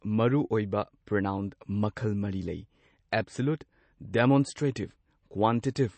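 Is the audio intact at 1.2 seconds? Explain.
No. Throughout, likely MP3 compression at a low bitrate, near 32 kbps, cuts everything above 8.3 kHz and drops weak detail, so speech at 1.2 s sounds dull, watery and swirly.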